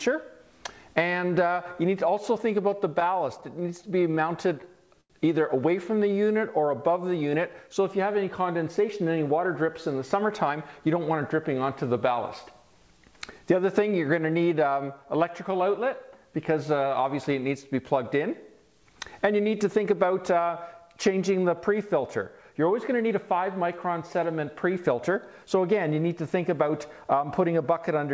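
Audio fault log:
3.00–4.37 s, repeated stalls (stutter): eleven short gaps, the longest 13 ms, where packets arrived late and the jitter buffer ran dry. The receiver extended the last sound each time, filling 105 ms, about 8% of the span. Nothing is lost, but playback drags and stutters.
4.32–4.87 s and 5.92–6.66 s, jitter buffer slow-down: to rebuild its reserve, the receiver repeated single pitch periods or pieces of pauses many times over. It added 44 ms in the first run (94% speed) and 63 ms in the second (93%), so the sound is drawn out at unchanged pitch.
5.01–5.12 s, short stall from a late packet: one packet missed its slot, and the buffer emptied. The receiver held the last sound for 89 ms until the packet arrived, raising the delay by 89 ms, then resumed where it left off. Nothing is missing, but that sound lingers too long.
8.79–11.21 s, jitter buffer speed-up: with more audio queued than targeted, the receiver trimmed short pieces of one or a few pitch periods repeatedly, removing about 150 ms in all. 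Playback runs at 106% with pitch unchanged, so this stretch sounds hurried.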